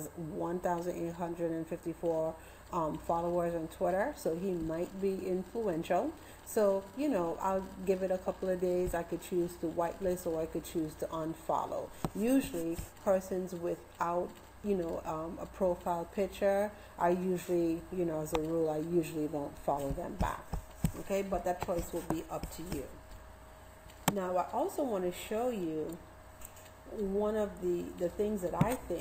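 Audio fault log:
Nothing stood out on listening.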